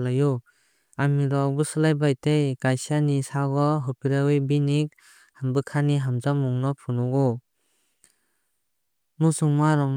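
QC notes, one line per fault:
No technical faults can be heard anywhere in the signal.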